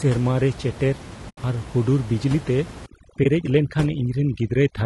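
Low-delay AAC compression runs through the whole speech clip, and the plainly audible damage is likely from AAC-ELD at a low rate, fitting about 32 kbps. The codec's short frames cannot separate closely spaced pitch harmonics well, and the tight bit budget leaves too little to code them cleanly. The voice therefore sounds rough and grainy, with noise filling the gaps between harmonics and a top band that sounds lowered and synthetic.

AAC frame loss with muting opens a hole from 1.29 to 1.38 s, a gap of about 80 ms that fits four lost frames. The decoder replaced the missing frames' spectrum with zeros. Because the transform windows overlap, the sound fades down into the gap and back up out of it over roughly a frame rather than stopping sharply. The result is a soft-edged dropout.

Overdone noise removal starts at 2.86 s and continues to the end. The room noise, which sits about 16 dB below the speech, led the reduction into pushing individual frequency bands far down or off whenever they came close to its noise estimate. 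Quieter parts of the voice are removed along with the noise. The background falls to near silence with twinkling specks.

AAC frame loss with muting happens again from 3.23 to 3.26 s, this time a single lost frame, consistent with about 20 ms. The same zeroed spectrum and overlapping-window fade produce a short, soft dip. It falls inside the noise-reduced stretch.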